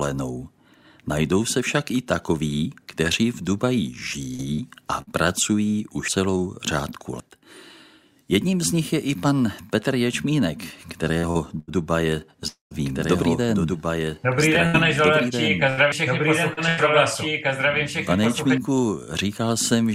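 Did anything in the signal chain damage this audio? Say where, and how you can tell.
Yes. Repeated packet loss on the network leg is heard at 4.35 to 5.10 s, 11.19 to 11.71 s and 14.67 to 16.80 s. Short holes, the longest about 50 ms in the first stretch and 84 ms in the others, are patched by stretching the preceding sound, giving choppy, robotic texture rather than clean skips.

Dropped buffers at 6.08 s, 7.20 s and 15.92 s are jumps where the audio skips ahead by roughly 70, 100 and 100 ms. The likely cause is a driver buffer overrun. Unlike packet loss, nothing fills the missing piece, and there is no silence. The two sides simply butt together.

A long network dropout at 12.48 to 12.74 s sounds different from the choppy stretches. It is one longer hole, where a fading buzz continues the last sound and then gives way to about 140 ms of silence before the audio resumes further on, with that section missing.

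A doubled audio track runs from 12.85 to 18.58 s. A full-band copy about 5 dB quieter follows roughly 2 s behind, likely from a second, slower capture path or a misaligned edit. It has no decay or room colouring, and it starts and stops abruptly, so it is not acoustic echo.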